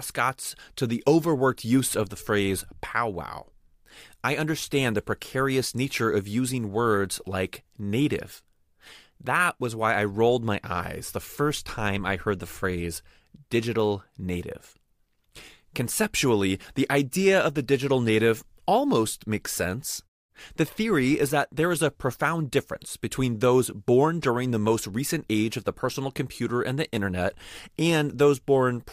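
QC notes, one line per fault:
No technical faults are audible in the speech; the background falls away to silence in the pauses and returns in time for each following phrase, with only very quiet sound lost at those transitions.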